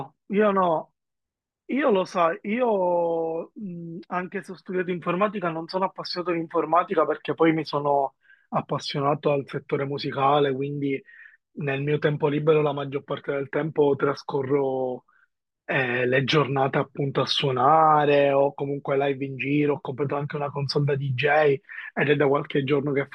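No technical faults can be heard anywhere in the recording.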